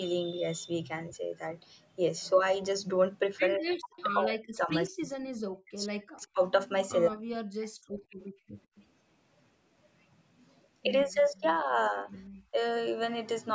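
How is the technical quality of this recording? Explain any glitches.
The recording has clear echo-canceller trouble: repeated speech dropouts, one brief echo, and one background dip. The audio stops at 8 kHz, which points to a 16 kHz call path.

Speech suppressed in double talk occurs at 3.58–5.29 s, 5.64–6.39 s, 7.08–7.75 s, 11.05–11.96 s and 12.51–12.57 s. The voice sinks sharply, by roughly 40 dB in the first three and much less later, likely because the canceller muted the talker while the far end also spoke.

An echo leak sits at 3.97–4.03 s: a faint copy of the voice, delayed by 151 ms and around 25 dB down. This is likely loudspeaker sound the loudspeaker side's canceller failed to remove, returned as a short scrap.

Background gated by the echo canceller appears at 8.05–8.53 s. The room sound drops by about 23 dB for a moment as the canceller clamps the microphone during loudspeaker playback, then recovers when it releases.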